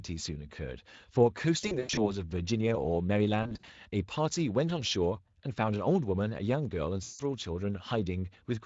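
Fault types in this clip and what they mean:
VoIP packet loss concealed by the speech codec: near 1.61, 3.43 and 7.03 s the Speex decoder covers missing packets by stretching the last sound into a buzzy tone or coloured noise that fades rather than silence, unlike a plain dropout, and the speech stays weak briefly after recovery.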